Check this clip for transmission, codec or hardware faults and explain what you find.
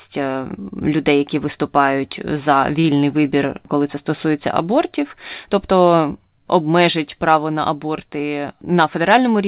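Two jitter-buffer faults occur in this speech, which carries no content above 4 kHz, consistent with a G.711 mu-law call path at 64 kbps.

From 2.80 to 2.86 s, just after "людей які виступають за", there is a short stall from a late packet. The buffer ran empty, so the receiver held the last sound for 37 ms and then resumed without loss, producing a brief drawn-out sound with a slight buzz or dip.

From 8.46 to 9.21 s, there is a jitter buffer speed-up. The receiver trimmed pitch-period pieces, around 40 ms in total, to shed excess delay. The speech runs at 105% speed at unchanged pitch and sounds hurried.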